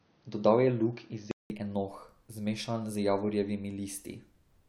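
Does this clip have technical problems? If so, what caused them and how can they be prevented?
Yes. From 0.0 to 1.5 s the speech is dull and band-limited, with nothing above 6.3 kHz and a faint added noise floor roughly 40 dB below the signal. At 1.5 s there is a 188 ms silence, then full bandwidth returns at "enoh zmešan z" with no clear change in level. This is likely an input switched to a poorer device, the system recording first through a narrower-band microphone or headset profile before changing over. To prevent it, lock the input device before recording starts.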